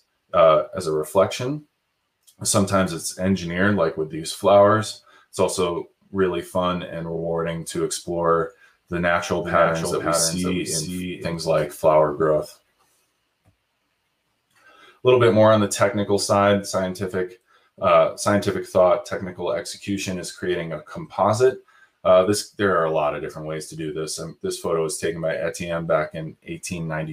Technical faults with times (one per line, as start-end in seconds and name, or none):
9.42-11.34 doubled audio track